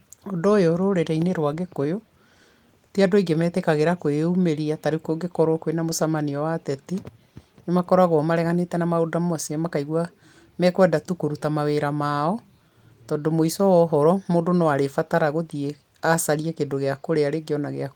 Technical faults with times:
none

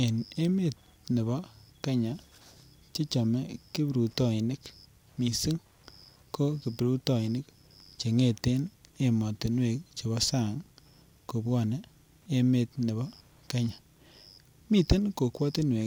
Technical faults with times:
0.00-15.86 Wi-Fi interference

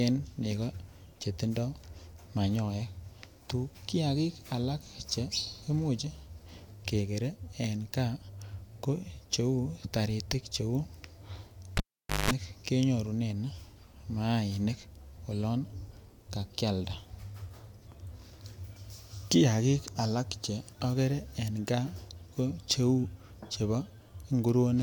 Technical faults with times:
11.77-12.31 cable pulled and plugged in

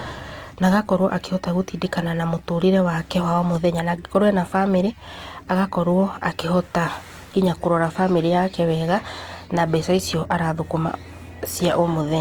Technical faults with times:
0.00-12.20 Opus compression
0.00-8.29 computer activity noise

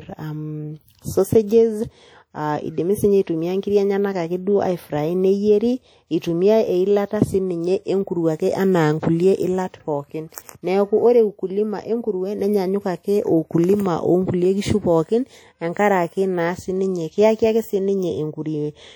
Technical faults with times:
0.00-18.95 WMA compression

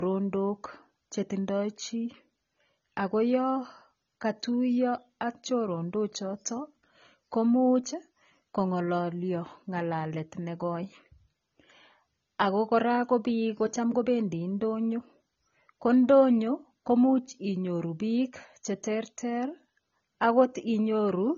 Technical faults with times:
0.00-21.37 low-bitrate audio saved at a high bitrate

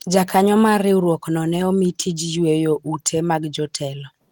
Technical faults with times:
none

